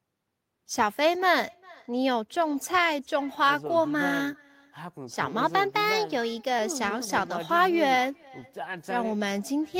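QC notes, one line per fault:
Throughout: echo with no canceller. The whole clip carries a faint delayed copy of the speech, sitting about 27 dB below the direct signal and trailing it by roughly 400 ms. It sounds thinner than the original, the way a loudspeaker sounds when re-captured across a room. That delay fits a full network round trip, with the far end's microphone picking up its own loudspeaker and nothing subtracting it before it returns.
5.43 to 6.59 s: drift correction step. For just over a second the speech runs about 5.5% fast and rises in pitch by 92 cents, close to a full semitone. Speed and pitch move together, which points to resampling rather than pitch processing. The likely cause is clock-matching software abruptly changing the playback rate to drain or refill its buffer, producing an audible detune for the duration of the correction.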